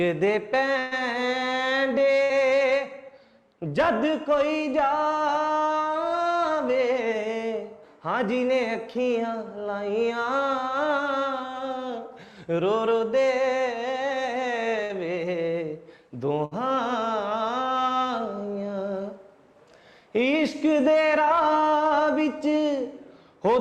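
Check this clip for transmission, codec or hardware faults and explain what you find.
There are four bursts of packet loss, at 0.79–0.94 s, 2.23–2.32 s, 14.83–14.92 s and 16.45–16.54 s. A run of packets went missing, so the receiver stretched the last sound over the gap while fading it, for about 120 ms at first and about 60 ms after that. A pitched sound becomes a held buzz and a noisy one a dying hiss. Unlike a plain dropout, the gap is filled rather than left empty, and the audio resumes with a stretch skipped.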